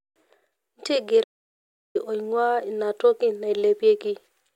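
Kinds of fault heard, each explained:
Playback stall: The speech just cuts out at about 1.23 s and the output sits silent for roughly 0.71 s, until around 1.96 s, before the speech picks up again. That dead gap in mid-flow is the telltale sign. It's most likely the player starving for data or its audio thread getting blocked, so nothing was sent to the output until it recovered and carried on.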